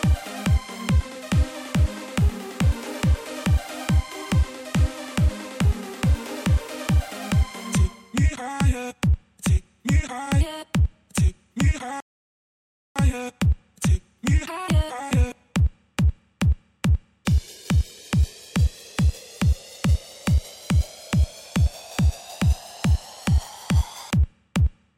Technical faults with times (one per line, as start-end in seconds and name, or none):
12.00-12.96 playback stall